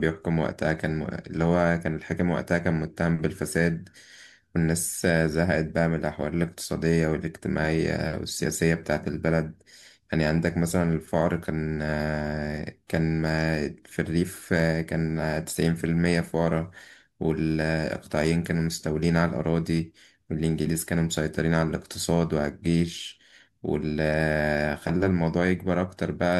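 Speech recording, with nothing technically wrong that can be heard.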